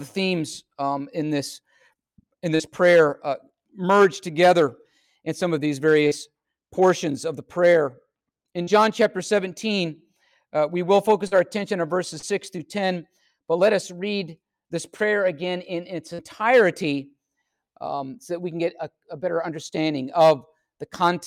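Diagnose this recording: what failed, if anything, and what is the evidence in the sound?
Short concealed packet loss on the network: about 40 ms went missing at 2.55, 6.07, 8.63, 11.27, 12.19 and 16.14 s, and the decoder extended preceding sound, leaving brief smears.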